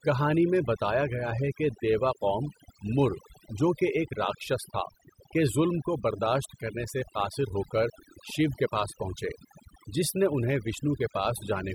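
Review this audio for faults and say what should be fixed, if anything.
The whole clip suffers from overdone noise removal. A noise reduction stage was driven too hard. It pushes individual frequency bands far down, or shuts them off, whenever they sit near its noise estimate. Quieter parts of the speech get caught too. The pauses drop to near silence, dotted with twinkling specks. To prevent this, use a gentler reduction setting and check the result by ear.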